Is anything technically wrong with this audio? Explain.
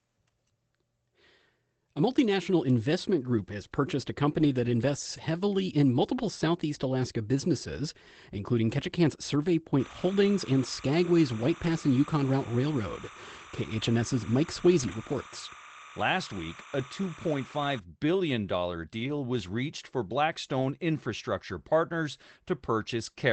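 Yes. There are two kinds of fault in this speech.

Lost packets rebuilt from error correction occur at 4.31 s (80 ms, between "group has purchased a" and "that invests heavily in"), 5.17 s (20 ms), 11.63 s (40 ms), 14.79 s (80 ms), 16.79 s (20 ms), 18.99 s (60 ms, just before "was reached for") and 20.57 s (40 ms, just after "was reached for"). Each lost stretch was replaced by a low-bitrate copy carried in the next packet. So there is no gap, but those moments sound briefly rougher and noisier.

Timecode bleed runs from 9.79 s to 17.79 s. A square-wave timecode signal, consistent with 29.97 fps code, leaks into the audio. It flips between pitches near 1 and 2 kHz. It is heard as a steady chirping warble, well below the speech.

The Opus call path at 24 kbps is audible only as its usual coding noise and a top end limited to 8 kHz.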